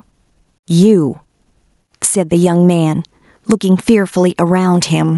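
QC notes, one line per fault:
Throughout: gain pumping. The level swings by roughly 10 dB, so loud and soft passages sit unnaturally close and the speech sounds squashed, likely from excessive input gain driving a fast limiter.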